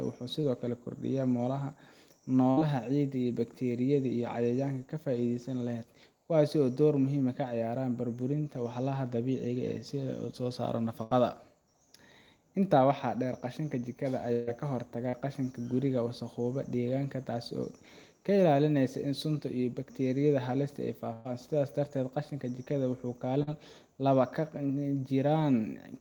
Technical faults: short concealed packet loss; burst of packet loss

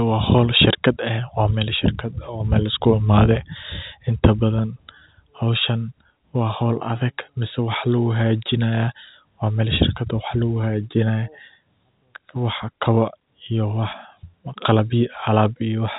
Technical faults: none

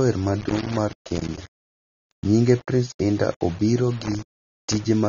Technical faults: low bit depth without dither; AAC compression; loose connector crackle

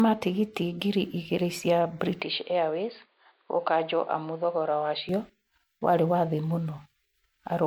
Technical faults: generation loss; input switched to a poorer device

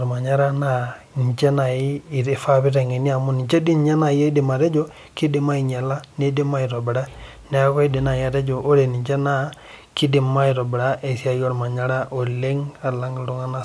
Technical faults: none

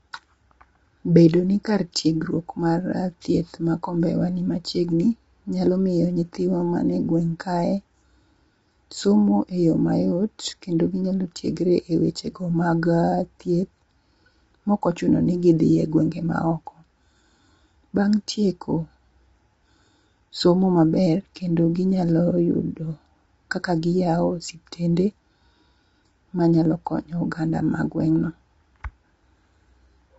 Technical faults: low-delay AAC compression

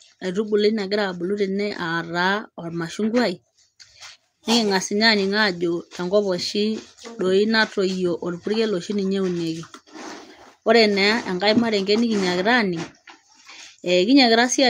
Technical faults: none

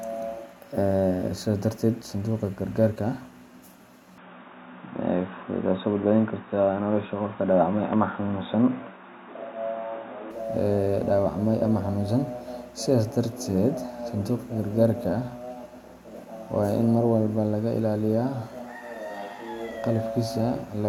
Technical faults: input switched to a poorer device

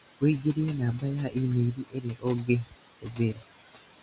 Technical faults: noise suppressor artifacts; speech cut by the noise suppressor

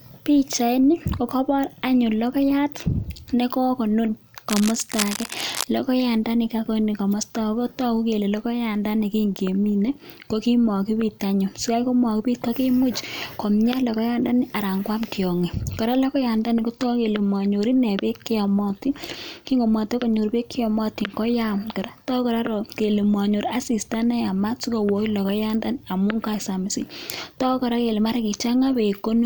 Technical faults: cable scratch noise

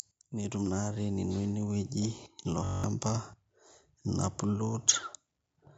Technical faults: automatic gain rising; system hang loop

